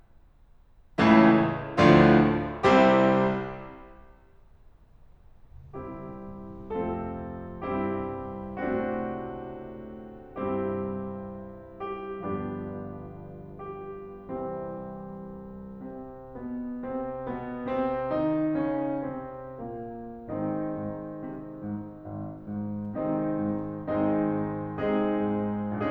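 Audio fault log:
No audible faults found.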